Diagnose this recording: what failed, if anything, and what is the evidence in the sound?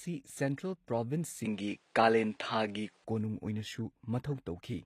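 Codec stage: plainly audible damage throughout, with nothing above 14.9 kHz, likely HE-AAC at a low bitrate, its replicated treble misaligned with the real harmonics below.

Input stage: from 1.45 to 3.05 s the band stops at 10.5 kHz, level shifts about 5 dB and new noise appears about 40 dB down, likely a switch to a poorer device.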